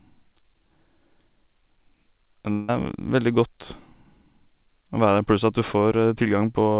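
At 2.52 s the stream most likely suffered a long network dropout: packets stopped arriving until about 2.70 s, and the receiver had nothing real to play. It bridged the gap for roughly 160 ms by extending the last sound into a buzzy, fading tail without falling to silence. When audio returns, about 160 ms of content is simply gone, so the speech jumps ahead. Throughout, the call codec's narrowband sound, with nothing above 4 kHz, fits G.711.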